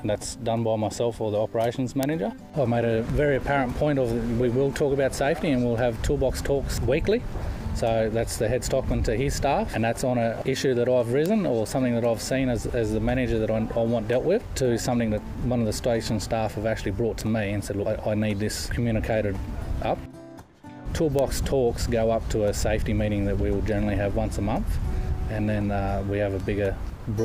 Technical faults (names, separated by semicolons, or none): bit error spike